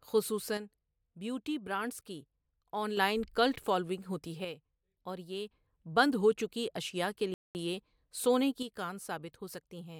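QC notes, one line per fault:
0.57–2.97 s, one channel drops out: the speech abruptly falls about 6 dB until just before "کلٹ فالوونگ ہوتی", likely because one stereo channel vanished before the mono sum.
4.45–5.51 s, one channel drops out: after "کلٹ فالوونگ ہوتی" the level sags about 6 dB until "بند ہو", likely because one channel was lost and only half the shared signal remained.
7.34–7.55 s, rebuffering stall: right after "اشیاء کے" the speech cuts to silence for 210 ms, then resumes exactly where it stopped, adding time while the player waits for data.
8.63 s to the end, one channel drops out: the level drops about 6 dB and stays down, likely because one stereo channel is missing from the mono mix.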